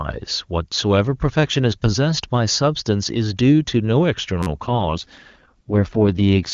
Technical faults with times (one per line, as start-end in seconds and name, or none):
2.53 repeated buffer
4.43-4.47 repeated buffer
4.67-6.53 AMR rate drop